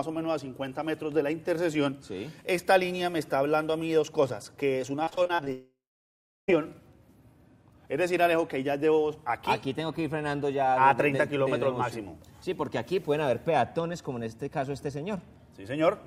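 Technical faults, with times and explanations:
5.03–5.48 s, repeated packet loss (robotic sound): a rapid series of short holes, the longest about 35 ms. Each is bridged by extending the preceding sound, and roughly 38% of this span is filled that way, giving a choppy texture with fragments missing.
5.52–6.50 s, long network dropout: the sound stretches into a fading buzz or hiss, then about 0.7 s of silence, before resuming with nearly a second of material gone. The likely cause is an extended interruption in arriving audio, with the receiver concealing until it gives up.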